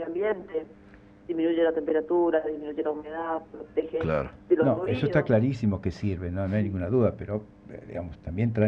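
No technical fault can be heard anywhere in this audio, and the signal holds steady throughout with no interruptions or disturbances.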